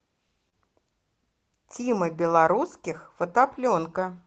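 Short concealed packet loss at 0.49 to 0.54 s: about 20 ms of the call arrived too late, so the receiver extended the preceding sound for 25 ms, leaving a brief smeared wobble. A lost packet rebuilt from error correction follows at 2.26 to 2.28 s. This 20 ms stretch, which fits a single lost packet, played from the low-bitrate copy carried in the next packet, so it sounds rougher and noisier with no gap, against the Opus call audio's 8 kHz upper limit.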